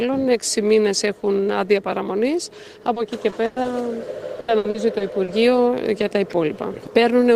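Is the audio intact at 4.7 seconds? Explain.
No. Repeated packet loss (robotic sound) runs from 4.40 to 5.30 s. Five dropouts, the longest 80 ms, are patched by extending the previous sound, leaving about 27% of that stretch as filled-in audio and giving a choppy, robotic texture.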